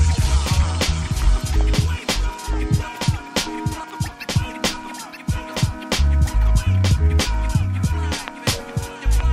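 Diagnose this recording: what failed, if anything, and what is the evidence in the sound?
A doubled audio track runs throughout. A second full-band copy trails the original by about a second, a few decibels quieter, with no decay or room colouring. Unlike acoustic echo, there is a single clean repeat. The likely cause is a slower second capture path or misaligned edit.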